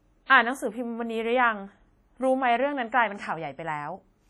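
From start to finish, the speech rings and sounds washy, with hiss breathing along with it. Heavy WMA compression at a low bitrate, roughly 32 kbps, is the likely cause.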